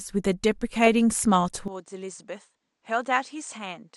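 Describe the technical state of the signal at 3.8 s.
At 3.8 s the signal is inside a stretch running from 1.68 s to the end of the clip, where the sound has lost everything above 9 kHz, dropped roughly 10 dB in level, and gained a faint new background hiss well below the signal. The likely cause is an input switched to a poorer device. A plain low-pass filter or bandwidth cut would leave level and noise floor alone; here all three change at once, with no gap at the switch.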